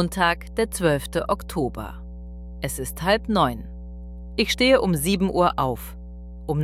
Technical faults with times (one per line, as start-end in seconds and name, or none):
0.00-6.63 mains hum